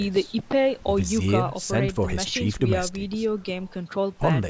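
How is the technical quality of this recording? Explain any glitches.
No technical glitches are audible.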